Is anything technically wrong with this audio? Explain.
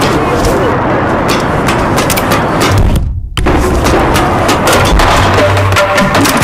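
Yes. Hard clipping runs through the whole clip. The signal is driven roughly 24 dB beyond what the converter or processing stage can pass, so its peaks are sliced off flat, and about a fifth of all samples sit pinned at the ceiling. Those squared-off tops generate harmonics reaching high into the spectrum. With overload this heavy, every loud passage carries a harsh, buzzing fuzz rather than occasional crackle.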